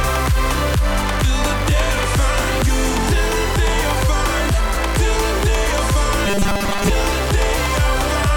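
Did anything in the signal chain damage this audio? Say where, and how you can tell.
Yes: robotic sound from repeated short buffers, 6.26 to 6.90 s, at the driver or buffer stage. A rigid metallic buzz at 200 Hz takes over most of the sound there. This is likely from audio arriving too seldom, so the software replayed the last 5 ms and skipped real audio.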